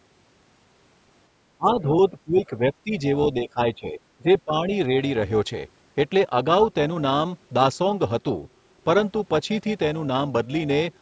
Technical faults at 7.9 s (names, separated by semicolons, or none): overlap-add ripple